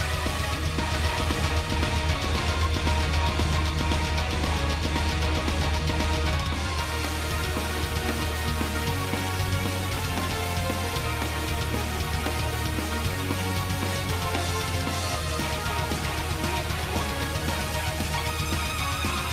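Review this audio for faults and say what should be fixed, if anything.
A doubled audio track runs from 0.94 to 6.38 s: a full-band second copy, about 5 dB quieter, trails roughly a second behind, likely from a slower duplicate capture path. Unlike an echo, it has no decay or room colour and cuts in and out abruptly. Route each source through a single capture path and check edits for overlapping duplicate regions.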